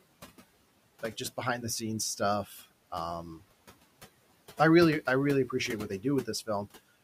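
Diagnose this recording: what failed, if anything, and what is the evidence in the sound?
The failure sits in call processing, where the noise suppressor cut into the speech. From 2.45 to 2.62 s the speech level sags by up to about 9 dB, and it sounds swallowed and faint. Roughly 150 ms of sound is affected. The suppressor misjudged that stretch as noise and pulled it down along with the background. The room noise sits about 21 dB below the speech, yet the suppressor still clamped the quieter speech energy.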